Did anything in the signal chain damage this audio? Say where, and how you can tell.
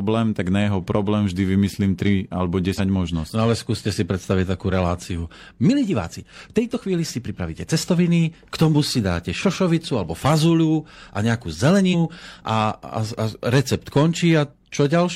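Yes, at the codec stage. Compressed frames were skipped at 2.74 s and 11.89 s. At each point the speech jumps ahead. The first jump loses about 50 ms and the second about 150 ms, which fits one and then three frames of 46.4 ms each. Those frames were missing or rejected as damaged by the decoder.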